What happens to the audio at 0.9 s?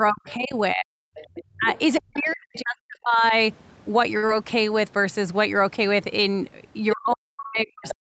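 At 0.9 s the clip is at the end of speech suppressed in double talk, running from 0.0 to 0.94 s. The speech dips in pieces, up to about 40 dB, for roughly 0.7 s in total, likely because an echo canceller turned down the near talker along with the echo.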